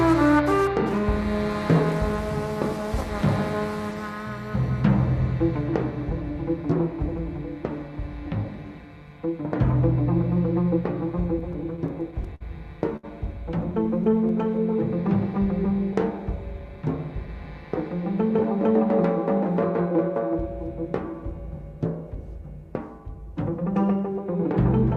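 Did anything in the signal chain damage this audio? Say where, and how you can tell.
Yes, the network side did, with three separate jitter buffer problems.

Repeated stalls (stutter) run from about 11.39 to 12.43 s. Packets kept showing up late, the buffer ran dry nine times, and the receiver patched roughly 125 ms by holding the last sound. The longest gap was 56 ms, so the audio drags and stutters there.

Then there's a short stall from a late packet at 12.97 to 13.05 s. One packet missed its slot, and the receiver stretched the previous sound for about 68 ms until it landed. Nothing is lost, but that moment hangs too long.

Finally, a jitter buffer speed-up at 16.59 to 17.27 s. The buffer had overfilled, so the receiver snipped out tiny pitch-period chunks, roughly a tenth of a second in all. Playback runs at about 111% speed with the pitch unchanged, so it sounds briefly rushed.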